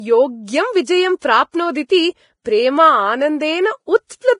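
Throughout, the speech carries heavy codec damage that most likely comes from Vorbis compression. Nothing reaches above 10.6 kHz, and the upper band that remains is grainy and hissy, with treble detail turned into noise of similar energy. The wear fits a low bitrate of around 28 kbps. A plain low-pass filter would dull the top end cleanly, whereas here the surviving high band itself is roughened.

Pre-echo appears three times: from 1.19 to 1.22 s, from 1.87 to 1.90 s, and from 2.43 to 2.46 s. Each time a sharp attack landed late in a transform block, and the quantisation noise sized for that loud onset spread back into the quiet moment before it. The result is a brief hiss lasting 28 to 30 ms that runs just ahead of the attack, leaving the onset soft and smeared. A click or dropout would be a single instant of damage, but this hiss leads into the sound it belongs to.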